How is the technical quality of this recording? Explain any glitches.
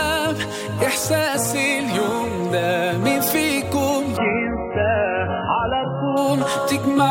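The recording has one glitch: an adaptive stream at a lower bitrate from 4.17 to 6.17 s. For those two seconds the player switched to a much cheaper encoding of the same audio, the kind of fallback a stream makes when the connection slows, then switched back. The change is abrupt, with no gap: the treble vanishes, leaving nothing above about 3 kHz, and the sound turns thin and smeared with codec artefacts. That fits a drop from roughly 128 kbit/s MP3 to around 8 kbit/s.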